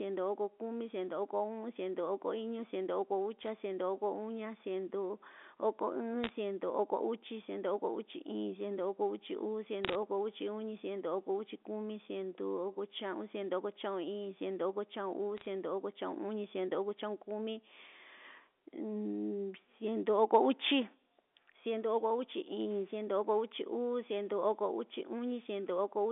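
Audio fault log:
3.41–3.48 s, 6.24–6.30 s, 9.85–9.95 s (just after "uchi uu") and 15.37–15.46 s: bit errors on a digital phone line. A fraction of a percent of bits are flipped in the A-law stream. Each error corrupts a single sample, so sharp ticks crackle over otherwise intact speech. The waveform shows isolated one-sample spikes, and the spectrogram shows thin vertical lines spanning the 250 Hz to 3.6 kHz telephone band.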